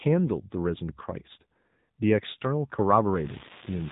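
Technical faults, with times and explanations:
Throughout: AMR narrowband mobile codec. The speech is band-limited, with nothing above 3.8 kHz, and has a plainly buzzy, synthetic edge that fits a low mobile bitrate near 8 kbps. A spectrogram shows a hard ceiling at 3.8 kHz and smeared, blocky harmonics.
3.15 s to the end: unreliable data bit. A steady crackle sets in and persists through pauses, because one marginal data line flips its bit on a random share of samples. The waveform shows scattered spikes of one fixed height, and a spectrogram shows broadband speckle.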